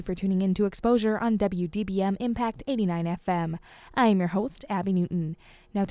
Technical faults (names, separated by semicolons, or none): none